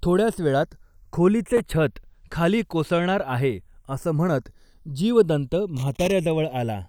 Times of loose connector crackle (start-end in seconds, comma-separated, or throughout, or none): 1.57-1.60, 5.77-6.12